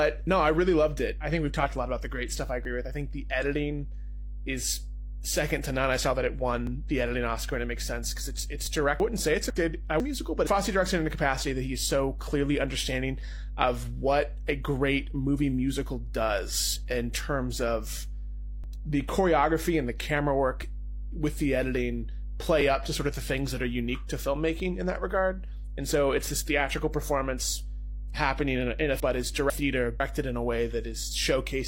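A steady 50 Hz mains hum runs through the whole clip, strong and nearly as loud as the speech. Unlike a buzz, it stays a smooth low tone with only a few low harmonics.

At 2.65 s and 6.67 s, there is overlap between stream segments. Each time, about 30 to 40 ms is cut away where 2-second segments meet, so the waveform jumps. The result is a small skip, with no silent gap as a dropout would leave.

From 9.0 to 10.0 s, chunks play out of order. One half-second chunk arrives a chunk late, so the two halves play swapped. Nothing is missing, but the moment sounds jumbled.

The segment-overlap skips return at 18.64 s and 22.61 s. The chunk swap recurs from 29.0 to 30.0 s.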